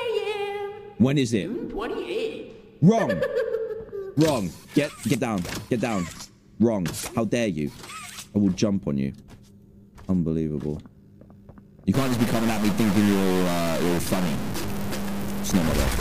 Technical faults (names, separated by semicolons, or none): stuck bit